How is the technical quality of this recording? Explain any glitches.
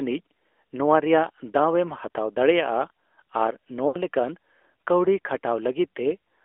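Technical quality is limited by narrowband mobile coding throughout, with one short dropout.

AMR narrowband mobile codec, whole clip: the speech passes through a 300 to 3400 Hz line band and a vocal-tract model excited by sparse pulses. The damage is plainly audible as a muffled, buzzy, synthetic voice, consistent with a mid-range rate near 10.2 kbps.

Lost AMR speech frames, 3.88 to 3.97 s: about 60 ms of speech went missing, which fits three consecutive lost 20 ms frames. The decoder repeated its last good pitch and vocal-tract settings at falling gain, so the speech briefly smears and fades before recovering, rough for a moment.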